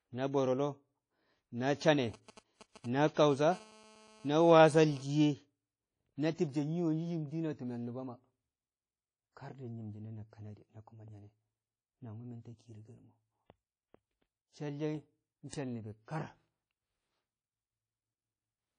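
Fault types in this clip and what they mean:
WMA compression: The speech sounds ringing and washy throughout, with hiss that swells and fades along with the signal. The smearing is plainly audible, and nothing is heard above about 10.1 kHz. This likely comes from a WMA 1 encoder, which fits a low bitrate near 32 kbps.
GSM signalling bursts: From 1.81 to 3.33 s, short groups of 217 Hz buzzes gallop in a dit-dit-dit rhythm, roughly 20 dB below the speech. A nearby 2G phone is signalling, and the audio circuit rectifies its radio bursts into sound.
GSM phone buzz: From 3.52 to 5.03 s, a hard, raspy 217 Hz buzz full of harmonics runs beneath the speech, unrelated to it, at about 25 dB below. A nearby 2G phone in a call pulses 217 times a second, and the circuit rectifies each pulse.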